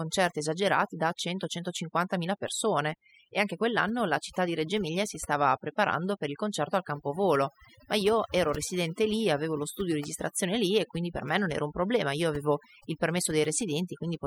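Throughout the speech, overdone noise removal gates bands near the noise estimate, leaving near-silent gaps with twinkling specks and a spectrogram full of isolated bright blobs on black.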